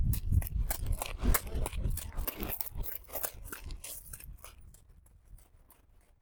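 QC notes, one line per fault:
0.34–5.82 s, clock drift buffer slips: a short click recurs every 1.1 s, about seven in all, each a tiny discontinuity in the sound where a small block, on the order of 15 samples, goes missing or is repeated. The likely cause is two devices on separate clocks disagreeing by roughly 300 ppm, so the buffer between them creeps until it has to slip. Random dropouts or packet loss would land irregularly; these clicks keep a steady spacing.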